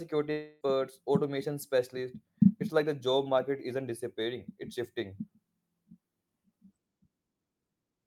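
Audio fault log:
0.31–0.64 s, long network dropout: the sound smears into a fading buzzy continuation for about 0.3 s before "automation specialists" picks up, with nothing from that stretch actually heard. Likely a network gap, with the receiver papering over the missing audio.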